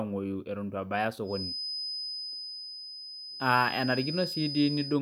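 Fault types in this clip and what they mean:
Feedback whistle: From 1.23 s to the end, a thin 5 kHz tone sits about 10 dB below the speech, swelling and fading slowly, likely from a loudspeaker-to-microphone loop held just short of runaway. A spectrogram shows one unbroken horizontal line.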